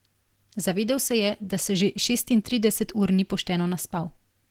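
Opus compression runs through the whole speech clip, audible as a muffled, hoarse, grainy quality with content still reaching about 20.4 kHz. The sound points to a low bitrate, around 16 kbps, likely in the encoder's hybrid speech mode, which thins detail rather than narrowing bandwidth.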